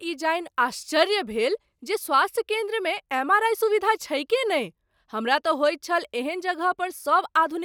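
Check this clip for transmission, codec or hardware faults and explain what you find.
No faults turn up anywhere in the speech. There is no moment in the recording that calls for comment.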